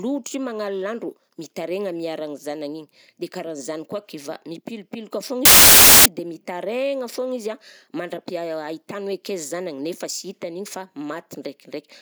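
At 5.45 s the speech is cut by a hard-edged burst of very loud white noise lasting about 0.6 s, to 6.06 s. This is file tags played as audio: an embedded cover picture's compressed data was decoded as samples, producing dense, random static.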